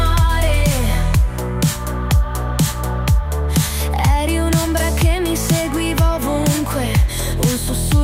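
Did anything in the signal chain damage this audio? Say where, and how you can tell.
No, nothing audible points to damage at any stage of the chain.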